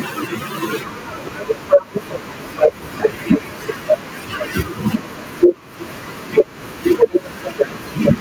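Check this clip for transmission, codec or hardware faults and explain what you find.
Gain pumping runs through the whole speech clip. The microphone gain was likely set far too high, so a fast limiter or compressor clamps down each time the talker gets loud and releases again in the pauses. That swing is on the order of 10 dB. Loud and quiet passages sit unnaturally close in level, leaving the speech sounding squashed and breathing.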